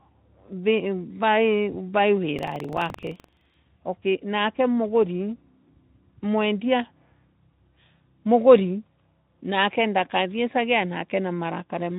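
From 2.35 to 3.55 s the speech picks up a low, robotic rattle buzzing at about 23.4 Hz. This is buffer tearing: the writer and the hardware reader have slipped, so each period, which fits a 2048-sample buffer, replays a small slice of audio from a fraction of a second earlier, with hard joins. Underneath, the Speex coding sounds lightly hoarse.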